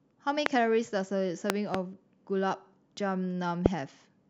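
Loud pops hit at 0.46 to 0.48 s, as a quick pair between 1.50 and 1.77 s, and at 3.66 to 3.68 s, each far above the speech level, likely voltage pulses from a switch or static. Unlike a dropout, the speech continues underneath each thump.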